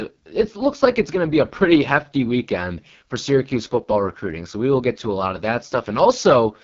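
From start to end the speech carries heavy AMR wideband (HD Voice) codec damage, rough and raspy, which fits the lowest 6.6 kbit/s mode. Above 6.4 kHz there is only smeared synthetic noise, and a spectrogram shows nothing above 7.3 kHz.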